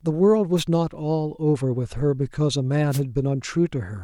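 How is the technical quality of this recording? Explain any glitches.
The recording has two wireless microphone noise hits, at 0.56 to 0.65 s and 2.90 to 3.01 s. Each is a brief swish of static over the speech, where the analogue FM radio link faded through reflection cancellation and receiver noise rose through.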